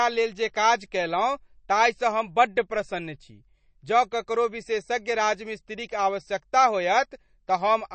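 From start to finish the speech carries plainly audible MP3 compression damage, with nothing above about 8.3 kHz, which fits a low bitrate near 32 kbps. Starved of bits, the encoder likely dropped the treble and let weak frequency lines flicker between frames, giving a watery, swirling texture.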